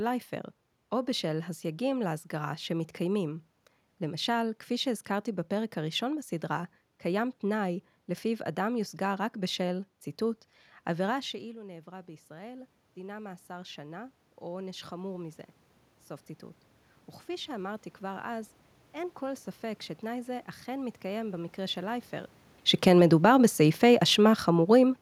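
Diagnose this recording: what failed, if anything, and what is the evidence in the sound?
Automatic gain rising, in call processing. Near 11 s the speech drops sharply, by about 16 dB, as the talker moves away. From 11.3 to 15.47 s the gain control slowly adds about 8 dB. Voice and room noise swell together, which marks gain riding, not the talker.

Automatic gain falling, also in call processing. Around 22.5 s the talker shifts position. From 22.72 to 24.97 s the gain control pulls back about 4 dB. The sound sinks gradually, and the background sinks with it.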